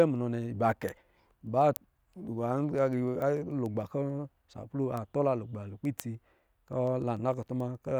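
Speech carries word clock ticks from 0.16 s to 7.90 s: sharp clicks roughly every 0.15 s, around fifty in all, as an unlocked receiving clock drifts about 150 ppm and drops or repeats one sample. Waveforms show discontinuities; spectrograms show thin, evenly spaced vertical lines.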